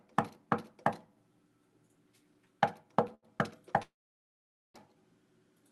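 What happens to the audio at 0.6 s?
Nothing goes wrong at 0.6 s: the sound carries on intact through that moment, with only the ordinary character of the Opus call path, whose coding noise is present and whose top end stops at about 12 kHz.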